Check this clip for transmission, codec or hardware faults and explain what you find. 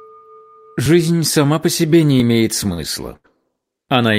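Two kinds of fault show up here. At 0.86 s and 2.2 s there's a small jump ahead, most likely a dropped buffer (overrun), where roughly 20 ms was overwritten before being read, so the two sides were spliced together. Then at 2.73 to 2.80 s and 3.16 to 3.26 s the sound hangs briefly, a short stall from a late packet. The receiver stretched the last bit for 47 ms and 80 ms until the packet arrived, then carried on with nothing lost.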